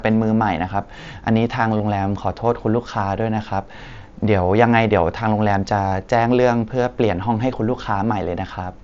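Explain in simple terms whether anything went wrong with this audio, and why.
A few brief dropouts occurred, each covered up by the receiver as concealed Bluetooth headset packet loss. At 1.78 to 1.80 s, 3.36 s and 5.89 to 5.92 s, voice packets from the headset never reached the phone, so the phone filled each gap by repeating a closely matching slice of the sound just before it. The single short gap at 3.36 s is almost hidden. The longer ones, lasting about 22 and 30 ms, can sound briefly buzzy before the real speech resumes.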